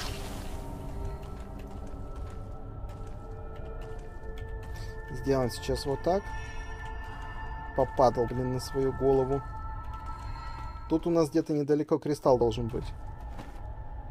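At 1.16, 8.26 and 12.40 s, compressed frames are skipped: the decoder drops whole frames, so the sound jumps ahead by roughly 70, 50 and 20 ms. Roughly three, two and one frames are lost at these points, leaving a small seam in the waveform at each join.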